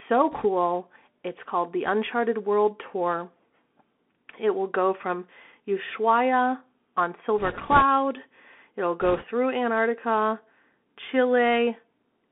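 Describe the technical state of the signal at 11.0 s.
At 11.0 s the speech carries Bluetooth CVSD headset codec damage, present throughout: adaptive one-bit delta coding confines it to 200 Hz–3.4 kHz, adding scratchy sibilants, granular hiss, and a spectrogram that's empty above 3.4 kHz.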